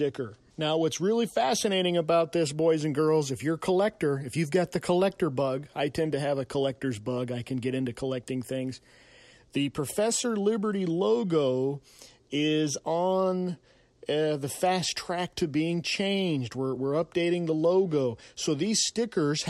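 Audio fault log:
Nothing stood out on listening to this speech recording.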